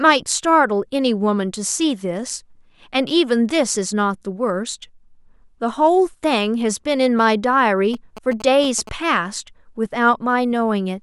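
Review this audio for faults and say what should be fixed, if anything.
From 7.94 to 8.89 s the speech carries GSM signalling bursts, a galloping dit-dit-dit of short buzzes repeating at about 217 Hz, roughly 15 dB below the speech. A nearby 2G phone exchanging signalling bursts is being rectified by the audio circuitry. Keep phones away from the microphone, cables and preamp, or use shielded, RF-filtered inputs.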